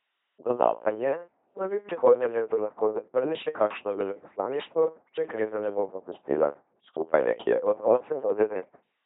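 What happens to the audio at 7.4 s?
At 7.4 s the speech is still passing through an LPC-10 vocoder, and this runs through the whole clip rather than starting there. Each short frame is resynthesised from a ten-pole vocal tract filter excited by either a pulse train or noise, never a mix, so the voice comes out as a buzzing, mechanical robot timbre with heavy damage. Nothing is present above 3.8 kHz, which fits a 2.4 kbit/s LPC-10 coder.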